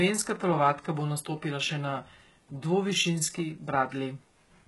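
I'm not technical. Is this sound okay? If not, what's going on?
No, the voice sounds gritty and lispy throughout, with nothing above 11.5 kHz. HE-AAC compression is the likely cause, rebuilding the treble from copied lower sounds.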